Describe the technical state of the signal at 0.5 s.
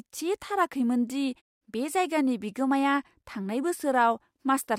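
At 0.5 s the speech signal is intact, with no dropout, distortion or other technical fault at that moment.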